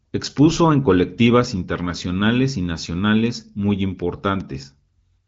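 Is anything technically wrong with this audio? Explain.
Yes, there is one fault in this speech, which was carried over a wideband AMR-WB (HD Voice) path with nothing above 7.3 kHz. At 4.41 s, a bit error spike: a single flipped bit throws one sample off by a power of two and back, producing one brief, broadband tick unrelated to the speech.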